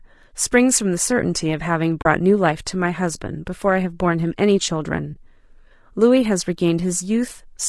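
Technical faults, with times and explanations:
Throughout: low-delay AAC compression, likely AAC-ELD at a low bitrate near 32 kbps. Speech sounds rough and grainy, with noise filling the gaps between harmonics on the spectrogram.
2.01 to 2.06 s and 5.13 to 5.16 s: AAC frame loss with muting. About 40 ms then 20 ms of audio drop to silence, showing as soft-edged gaps in the waveform.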